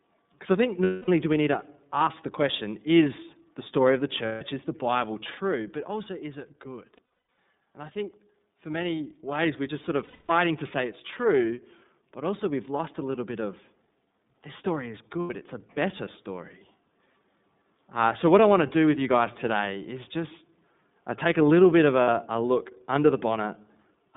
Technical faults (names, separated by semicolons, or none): iLBC codec; lost iLBC frames